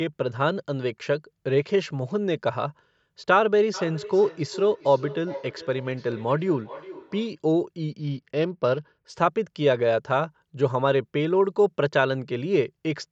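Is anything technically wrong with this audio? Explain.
Yes, the speech has two faults. From 3.74 to 7.4 s, a feedback echo between two devices repeats each word about every 0.4 s, up to about 15 dB below the voice, as a second device replays it. On a spectrogram, fainter, thinner copies trail each syllable. From 7.91 to 9.2 s, a Bluetooth SBC bit pool drop dulls and roughens the treble, consistent with the bit pool falling to roughly 9. A spectrogram shows the upper bands emptied and speckled below the call's normal 8 kHz ceiling.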